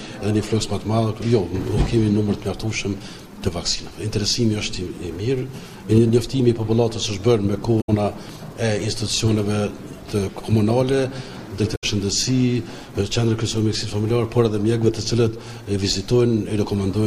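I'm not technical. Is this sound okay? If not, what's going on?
No. Two short stretches of the compressed file holding this sound were damaged, meaning some of the stored data went missing or was overwritten. This is called damaged data in a compressed stream. When playback reaches those spots, the player can't make sense of the data and has to hunt for the next clean piece to carry on from. You hear that as a brief chirp or blip, about a tenth of a second long, from 7.77 to 7.90 seconds and again from 11.72 to 11.84 seconds.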